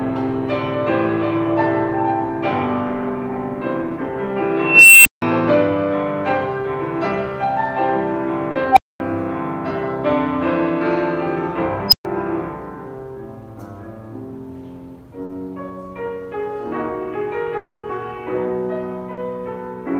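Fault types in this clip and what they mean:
Unstable filter: A recursive filter's coefficients went bad, so its output fed back on itself and grew until it overflowed and reset. Three tones swell and then cut to silence: near 3 kHz over about half a second, near 700 Hz, and near 5 kHz.
Short concealed packet loss: Forty milliseconds of audio reached the decoder too late at 8.51, 15.25 and 19.13 s. Each time the receiver extended the preceding sound to cover the gap and blended back, leaving a brief smear in place of the lost material.
Long network dropout: At 17.57 s, 260 ms of audio goes missing, likely because the network stopped delivering it. The receiver continues the previous sound, which fades to about 60 ms of silence before the clip resumes at 17.85 s without the lost portion.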